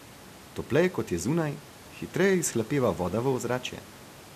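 No technical faults occur anywhere in this speech recording. Room noise sits in the background about 24 dB below the speech, a part of the recording itself rather than anything wrong with the system.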